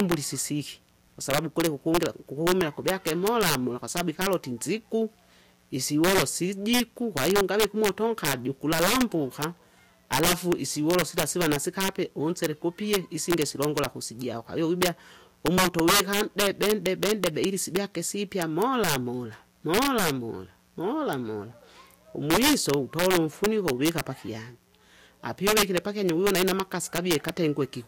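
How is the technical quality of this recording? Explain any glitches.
The recording has two faults that run through the whole clip: a mains buzz underneath and harsh overflow cracks on the loudest speech.

Mains buzz sits under the speech from start to finish, roughly 40 dB below it. Interference spikes at 60 Hz mains frequency carry harmonics reaching into the kilohertz range. That makes it a raspy, edgy buzz rather than the smooth, low hum of a pure 60 Hz tone.

Integer overflow appears throughout on loud peaks. The signal is driven about 12 dB past the integer limit, so roughly one sample in a hundred wraps to the opposite extreme instead of being held at the ceiling. Each wrap jumps across the full range, producing violent cracks far sharper than the flattened, fuzzy distortion of ordinary clipping.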